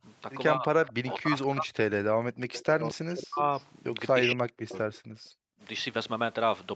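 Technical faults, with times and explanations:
0.57–1.79 s, 1.99–2.43 s, 2.69–3.44 s and 4.09–4.73 s: speech suppressed in double talk. The speech sinks by up to roughly 40 dB, then comes back. The first run loses about a second in total. The second loses about 0.4 s, and the last two around half a second each. This is likely an echo canceller turning everything down while both sides talked, unable to tell its own talker from the loudspeaker echo.
2.52–2.62 s and 3.57–3.65 s: echo leak. A faint, delayed copy of the speech surfaces in short scraps. It trails the original by 227 ms. The first scrap sits roughly 20 dB below the speech. The second is quieter, roughly 30 dB down. This is likely a far-end loudspeaker's sound reaching its microphone. That side's echo canceller did not fully remove it, so it came back down the line.
5.01–5.61 s: background gated by the echo canceller. The room sound drops by about 40 dB for well over half a second. 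The background does not fade naturally. It falls away abruptly and then returns. The echo canceller clamped the microphone hard while the loudspeaker played. It released once playback stopped, and the room sound came back.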